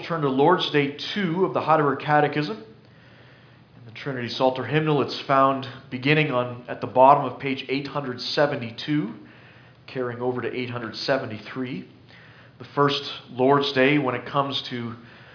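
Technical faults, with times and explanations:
No technical faults can be heard anywhere in the clip. There is nothing to mark with a time or explain.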